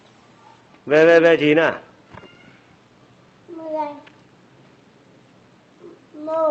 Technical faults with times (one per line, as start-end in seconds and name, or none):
none